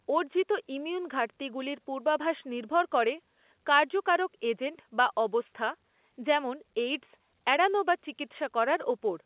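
Nothing stood out on listening to this speech, which comes across as ordinary A-law telephone audio with its expected narrow band.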